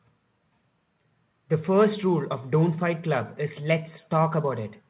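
No faults in the speech; the call path carries it band-limited with nothing above 4 kHz, which fits a narrowband G.711 mu-law link at 64 kbps.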